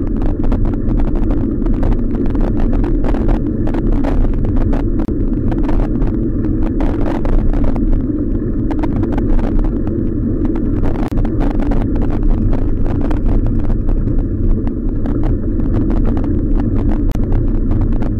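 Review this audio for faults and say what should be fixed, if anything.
Brief dropouts of about 31 to 34 ms cut into continuous sound at 5.05, 11.08 and 17.12 s, every 6 s: a gap at a join of encoded pieces, where untrimmed encoder delay and padding were left in. Encode the audio as one continuous stream, or trim each piece's encoder delay and padding before joining.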